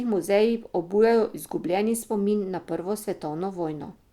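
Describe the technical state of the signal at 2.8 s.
At 2.8 s the speech signal is intact, with no audible technical fault.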